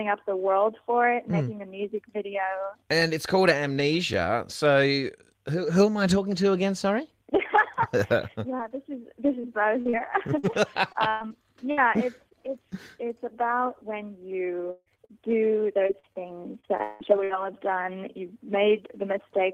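A single block of digital silence sits at 4.14 s. For about 4 ms the sound cuts straight to silence and comes straight back with no fade. At this length it is heard as a tick rather than a hole. The likely cause is an output buffer that was not filled in time.

Two stretches suffer repeated packet loss, giving a choppy sound with pieces missing. From 8.30 to 12.55 s there are 12 dropouts. The longest is 119 ms, and about 9% of the span is patched over. From 14.71 to 17.31 s there are 11 dropouts. The longest runs 166 ms, and about 22% is concealed. Each gap is filled by stretching the last good sound. That repetition gives the broken texture.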